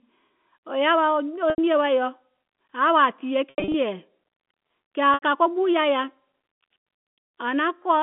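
Packet loss with pitch repetition at 1.50 to 1.58 s, 3.51 to 3.74 s and 5.14 to 5.22 s. The first and last gaps each drop 80 ms, which fits 20 ms packets. The receiver fills it by repeating the last pitch period, so the sound briefly holds with a buzzy sustain. The middle event scatters 160 ms of loss across 240 ms, with its longest run 80 ms, all within the narrow G.711 telephone band.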